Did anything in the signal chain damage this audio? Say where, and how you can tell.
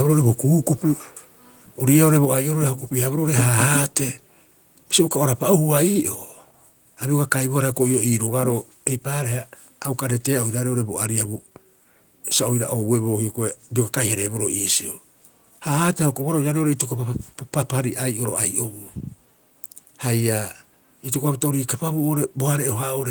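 Yes. At 2.25 s, just before "ai'orori a o", the speech and background fall together by about 4 dB in one step. This is a microphone volume stepped down, likely call processing cutting the input gain. The waveform envelope shrinks abruptly, and the spectrogram dims evenly across all frequencies.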